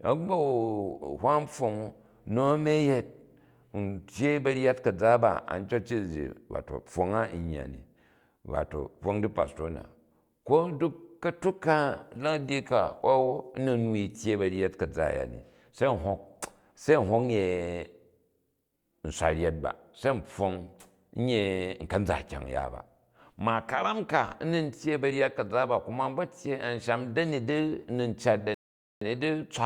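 A speech recording with a rebuffering stall near the end: at 28.54 s the sound cuts to silence and holds until 29.01 s, adding about 0.47 s, then picks up exactly where it broke off. The player ran out of downloaded audio and waited for more to arrive. Unlike a network dropout or packet loss, no speech is missing across the gap; the recording is simply paused and then continues intact.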